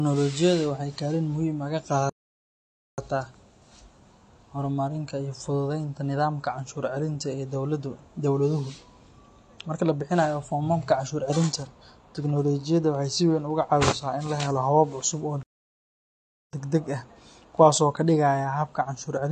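Throughout, the speech is dull and smeared, with nothing above about 9.7 kHz and a fizzy, unstable texture on sibilants. This is AAC compression, likely at a low bitrate around 32 kbps. A plain low-pass filter would only dull the sound, without this grainy smearing.

At 2.09 s, right after "ah ka", the sound cuts off abruptly in mid-flow and stays silent for about 0.89 s until 2.98 s. At 15.43 s it stops again for about 1.1 s, returning at 16.53 s just before "degdeg ah kuwaas". These are playback stalls: the player likely ran short of data and output nothing until it recovered. A natural pause would trail off, but here the sound stops dead, which sets these stalls apart.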